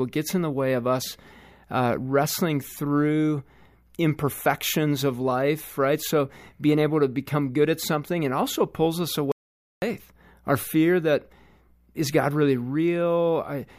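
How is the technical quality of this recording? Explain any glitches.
The speech has one clear glitch, an audio dropout to silence from 9.32 s to 9.82 s. The voice cuts off abruptly and the half-second gap is dead silence, with even the room tone gone, before the speech resumes mid-flow. Whatever was said in that gap is lost. The likely cause is a brief loss of the input signal, such as a momentary disconnection or accidental mute, while the recorder kept writing silence.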